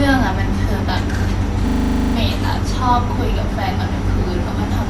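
From 1.68 s to 2.16 s the speech gives way to a rapid, rattling stutter, a single 40 ms fragment repeated 12 times at a rate of 25 Hz. At that rate it sits between a buzz and a machine-gun chatter. This is a system hang loop. The computer or its audio driver stalled, and the sound hardware kept replaying the same ring buffer until new data arrived. When the speech resumes, next to nothing of it appears to be missing.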